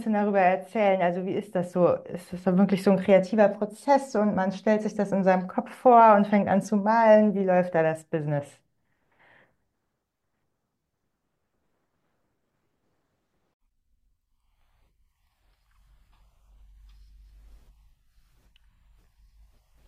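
From 0.0 to 4.0 s the speech is dull, its treble thin or synthetic, with heavier coding artefacts, then clears abruptly without a gap. This is an adaptive stream starting at a low bitrate, consistent with 48 kbit/s AAC, stepping up near 96 kbit/s.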